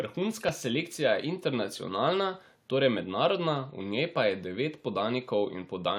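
At 0.49 s there's a repeated buffer: new audio didn't arrive in time, so the device replayed its last 1.45 ms chunk, which fits a 64-sample buffer, twice more. With a chunk that tiny, it comes across as a quick click or buzz rather than a stutter. The room noise sits about 42 dB below the speech.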